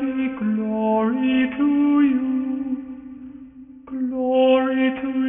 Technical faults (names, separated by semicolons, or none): aliasing